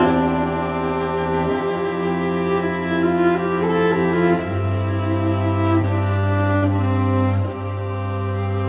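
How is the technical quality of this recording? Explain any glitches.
The music carries one glitch, a burst of repeated stalls (stutter) between 5.82 and 6.80 s, heard through narrowband telephone-style audio with nothing above 4 kHz, which fits a G.711 mu-law call path.

In that second, five gaps occur where late packets left the jitter buffer empty. Each time, the last sound was stretched to fill in, 132 ms in all, the longest gap 62 ms. Unlike dropouts, nothing is lost; the music drags and stammers rather than skipping.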